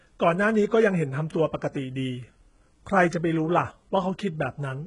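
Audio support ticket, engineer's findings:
Speech throughout, top end gritty and lispy, s sounds metallic. Nothing above 11 kHz. Likely HE-AAC compression, heavy damage, consistent with roughly 12 kbps. Treble rebuilt by band replication from copied lower bands; harmonics misaligned across crossover.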